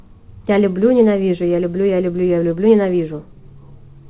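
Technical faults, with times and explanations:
No technical faults turn up here; the speech just has the narrow, phone-call sound of a WebRTC call path, with nothing above about 4 kHz, which fits a G.711 mu-law codec at 64 kbps.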